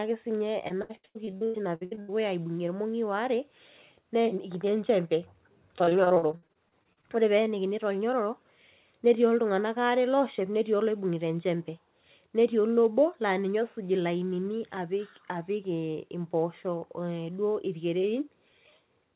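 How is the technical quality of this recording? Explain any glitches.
The recording has two bursts of choppy, robotic-sounding speech, and the whole clip is band-limited to nothing above 4 kHz, which fits a narrowband telephone codec such as G.711.

Repeated packet loss (robotic sound) occurs from 0.68 to 2.11 s and again from 5.79 to 7.05 s. The speech turns stuttering and robotic, with fragments audibly missing. Packets kept arriving late or not at all, and each hole was patched by stretching the preceding sound. Roughly a dozen holes in the first burst cover about 45% of that stretch, the longest 94 ms. About fifteen shorter ones in the second cover 29%, the longest 54 ms.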